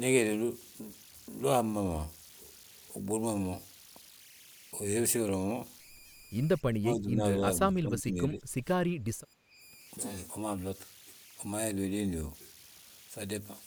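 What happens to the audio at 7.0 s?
From 6.74 to 7.23 s the speech dips sharply, by around 20 dB at its deepest. The likely cause is speech suppressed in double talk, where an echo canceller mistakes overlapping talk for echo and attenuates it. Under it, as throughout, runs grainy noise from a tone near 2 kHz, about 24 dB below the speech. These are converter idle tones: an undithered delta-sigma converter falls into repeating bit patterns at low input levels.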